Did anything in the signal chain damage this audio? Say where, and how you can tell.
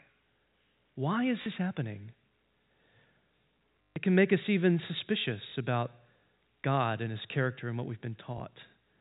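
Yes, at the network stage: packet loss with last packet repeated. Short robotic stutters occur at 1.42–1.46 s and 3.91 s (about 140 ms), and small blips at 5.50 s and 8.38 s. The 50 Hz buzz in the longer runs fits 20 ms packets being replayed until new ones arrived, over the 4 kHz-limited G.711 telephone band.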